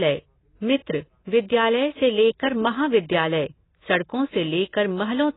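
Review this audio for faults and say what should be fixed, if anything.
Throughout, the speech likely passed through heavy AAC compression, consistent with roughly 16 kbps. Nothing survives above 3.9 kHz, leaving it dull and smeared. Encode at a higher bitrate, or keep an uncompressed copy for review.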